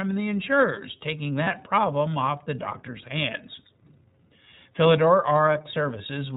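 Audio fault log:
throughout, iLBC codec: band-limited below 4 kHz, plainly audible rough, synthetic edge on speech, consistent with 30 ms iLBC frames at 13.33 kbps.
1.44–1.48 s, lost iLBC frames: between "the insurers taking" and "problem off the doctor's", a brief held buzzy vowel; one 30 ms frame lost, concealed by repeating pitch with noise.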